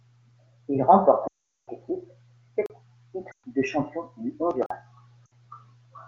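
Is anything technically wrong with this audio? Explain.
Yes. The speech has two kinds of fault.

Lost AMR speech frames occur at 1.28 to 1.69 s, 3.31 to 3.45 s just before "de champion du", and 5.26 to 5.34 s. Corrupted frames failed their check. The decoder repeated the last good settings at falling gain. The 400 ms run fits about twenty 20 ms frames. It drops to near silence within two frames. The shorter runs of 120 ms and 60 ms also drop to near silence, then a rough restart.

A block of digital silence appears at 2.66 to 2.70 s (about 38 ms) and at 4.66 to 4.70 s (about 43 ms), just after "de champion du". Samples were replaced by zeros, likely because the output buffer was not filled in time. The second gap fits a 2048-sample buffer. The sound cuts out with no fade, so each gap is a short hole.

The AMR wideband (HD Voice) codec itself sounds like its top rate, with little or no coding damage.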